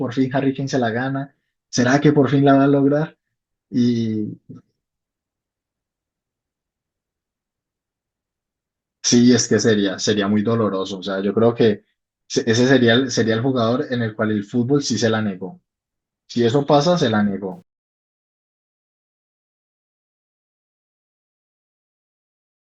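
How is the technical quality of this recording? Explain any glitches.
The recording has one glitch, at its end. Truncation distortion on the fade runs from 17.52 s to 22.70 s. As the speech fades out, the level stage keeps too few bits and adds no dither, which fits a 10-bit word length, so the waveform collapses into coarse steps. From 18.82 s the tail sounds gritty.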